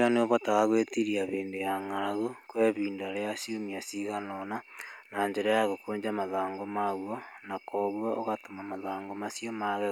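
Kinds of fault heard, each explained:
No kind of fault is heard in this speech.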